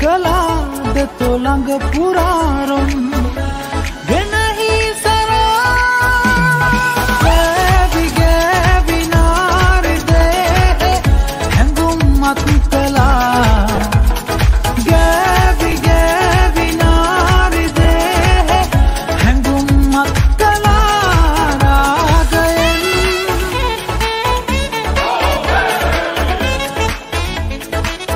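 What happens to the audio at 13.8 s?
Lost LE Audio frames at 13.76 to 13.78 s: the LC3 decoder fills the gap, about two 10 ms frames' worth, by repeating the previous spectrum with randomised signs, leaving a brief noisy smear.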